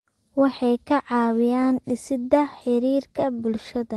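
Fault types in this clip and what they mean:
Nothing's wrong here; the speech just carries the usual character of an Opus call line, with its top end rolled off around 12 kHz.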